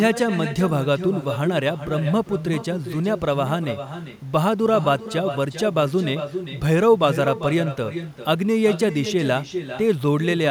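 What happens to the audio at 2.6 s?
At 2.6 s the speech carries echo with no canceller, present throughout the clip: a far-end loudspeaker feeds the microphone, returning each phrase roughly 0.4 s later, about 10 dB quieter and thinner. A spectrogram shows faint, delayed duplicates trailing every syllable band.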